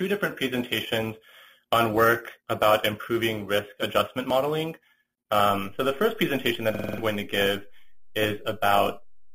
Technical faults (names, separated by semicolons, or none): overlap between stream segments; system hang loop